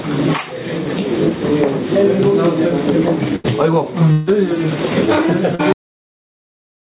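Right from the start there's gain pumping running through the whole clip, with the gain swinging by around 20 dB. The likely cause is gain set far too high at the microphone, with a fast limiter or compressor clamping down on every peak. The result is squashed dynamics, with loud and soft parts sitting uncomfortably close together.

At 3.36 to 3.47 s there's a burst of packet loss. Roughly 80 ms of audio never made it, and the receiver papered over most of that by stretching out the last sound and letting it fade. You hear it as a short held buzz or fading hiss, then the audio jumps ahead with that chunk simply gone.

From 4.12 to 4.3 s comes what sounds like a long network dropout, about 160 ms missing. There's no dead silence here. The gap is filled almost the whole way through by continued, decaying sound, a smeared buzz or hiss that trails off before the real audio picks up again further along, minus the stretch that was lost.

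Then at 5.55 to 5.62 s there's a short concealed packet loss of about 40 ms. The receiver patched it by extending the preceding sound and blending back into the real signal. It comes across as a quick smear or wobble, and anything very brief in that slot, like a consonant, can disappear.

Finally there's a cut-off end at 5.72 s. The audio stops mid-sound and drops straight to digital silence with no natural decay, and that silence fills the rest of the clip. The final buffers were never written or played out. Across all of this the call path is still audible as a bandwidth limit, with nothing above 4 kHz, which fits G.711 mu-law at 64 kbps.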